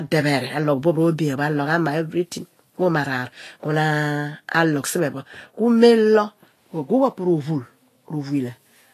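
A speech recording carrying plainly audible codec damage from start to finish, most likely Vorbis compression at a low setting, consistent with a bitrate around 34 kbps. Nothing survives above 14.2 kHz, and the treble beneath that cut-off turns to grainy hiss, with consonant attacks blurred and voiced tones roughened. A plain low-pass filter would only dull the top end. Here the remaining highs are replaced by noise of similar energy rather than simply removed.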